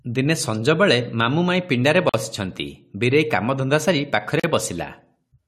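At 2.09 s and 4.40 s the speech drops into brief silences of 46 ms and 40 ms, each a gap at a join of encoded pieces. Separately encoded segments were butted together with encoder delay and final-frame padding left untrimmed, so the sound stops with smeared edges and resumes exactly where it left off.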